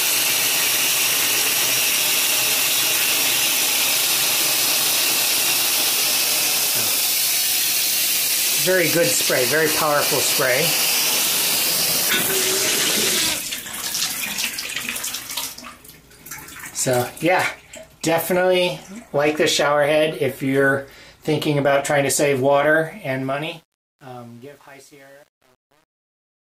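The audio ends with a fade-out from roughly 23 s to 26.6 s, and from 22.90 s onward it carries truncation distortion on the fade, worst between 23.43 s and 26.6 s. As the level drops, the tail turns gritty, which fits a gain stage keeping only 8 bits without dither. Unlike a noise gate chattering, the grit tracks the falling level itself rather than switching open and shut.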